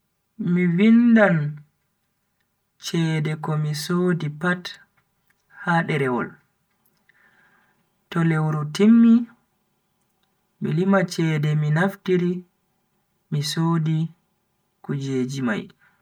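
A hollow, phasey quality colours the speech from start to finish, as if heard through a tube, with the body of the sound thinned out in a fixed way that never moves. That is channel delay (comb filtering): one channel arrives roughly 5 ms late, and when the two are summed to mono, the shared material cancels at regular intervals. The first notch falls around 100 Hz, with further dips repeating every 200 Hz or so up the spectrum.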